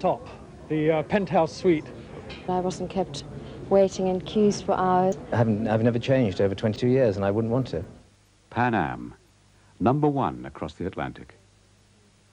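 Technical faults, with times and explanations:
3.2, 5.12, 6.76 and 7.84 s, dropped buffer (overrun): the sound jumps forward, skipping about 40 ms each time, and nearer a tenth of a second at 5.12 s. There is no gap of silence as an underrun would leave. The likely cause is samples being overwritten before the program read them.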